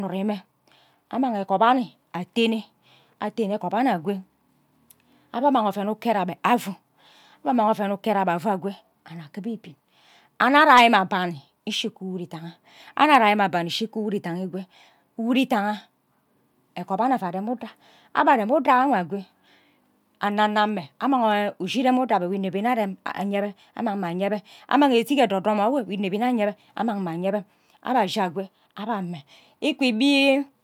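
Nothing technical goes wrong anywhere in this bit of speech, so there's no fault to point to at any moment.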